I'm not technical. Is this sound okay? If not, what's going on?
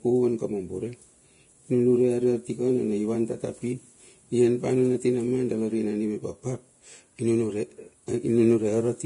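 No. From start to finish the speech sounds hissy and grainy, with a rough, fizzy edge on the voice and softened starts to sounds. There is no crispness at all above about 10.6 kHz. The likely cause is heavy Vorbis compression, a way of shrinking audio files. At this strong setting it discards the highest frequencies and stores the remaining treble so coarsely that the fine detail turns into hiss.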